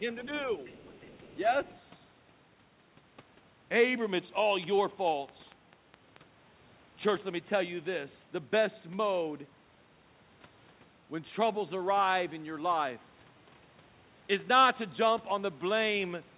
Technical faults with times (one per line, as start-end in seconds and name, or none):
0.65-1.36 other side's voice leaking through
1.63-1.78 other side's voice leaking through
4.64-6.17 train of clicks